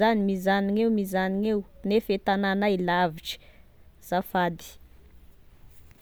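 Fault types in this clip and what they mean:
No technical fault can be heard anywhere in the recorded speech; the signal stays continuous and steady throughout.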